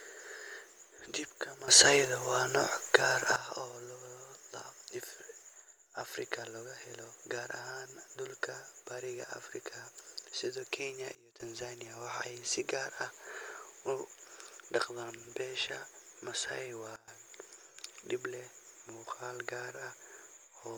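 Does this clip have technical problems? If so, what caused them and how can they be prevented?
Yes, there are two kinds of fault.

Sudden gain jump: the level steps up by about 12 dB from 1.68 to 3.36 s, then steps down by about 19 dB from 11.15 to 11.40 s and by about 18 dB from 16.96 to 17.08 s. Each change happens instantly, and the background noise rises and falls together with the speech. A compressor or automatic gain control would ramp smoothly and leave the noise floor steadier. The cause is likely a digital gain setting or bit shift applied without a ramp. To prevent it, smooth every gain change over several milliseconds.

Dropped samples: single sharp clicks occur at 3.11 s, 6.01 s, 9.23 s (just after "gaar ahaan dhulka bariga") and 19.70 s (just after "dib leh muuqaal"). Each click shows as a thin vertical line across the spectrum. The waveform jumps to a later value because a fraction of a millisecond of samples is missing. 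Unlike a dropout, no audible sound is lost, and unlike a gain jump, the level stays the same on both sides of the click. The cause is likely faulty buffer handling that skips samples. To prevent it, use adequately sized buffers and handle overruns and underruns correctly.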